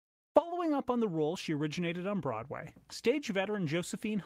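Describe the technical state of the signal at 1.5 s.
At 1.5 s the speech signal is intact, with no dropout, click, distortion or other fault.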